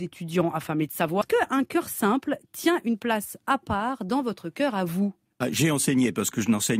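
Right after "affamés de", at about 1.21 to 1.23 s, the speech takes a skip ahead. Roughly a second of audio never plays, and the two sides are butted together with no silence in between. The audio was dropped, either on the way or by the jitter buffer when it overflowed, while later speech was already waiting. Unlike a dropout, there is no gap or concealment fill. The speech simply lurches forward with content missing, and the delay falls by about a second.

From about 1.33 s to 3.76 s, ending just before "dans votre", comes a jitter buffer speed-up. The buffer was still holding more than its target, so the receiver trimmed short pitch-period pieces again and again, removing about 200 ms in total. The speech runs at 108 % of its normal rate and sounds rushed. The pitch stays where it was, which separates this from a sample-rate mismatch, and nothing is lost outright, as it is in the skip.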